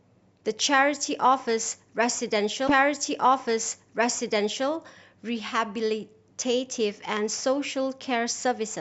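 At 2.67 s a stream segment is repeated: the player queued the same chunk of the stream twice, so about 2.0 s of speech, running to 4.67 s, plays a second time before the programme continues. A small blip marks the jump back, where the waveform breaks abruptly. On a spectrogram the same pattern of harmonics and formants appears twice in a row, with a thin vertical broadband line at the splice.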